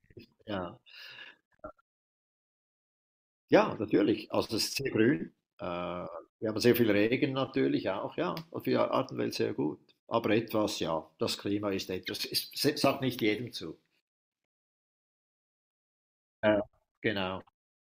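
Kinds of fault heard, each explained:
Nothing stood out on listening to this speech recording.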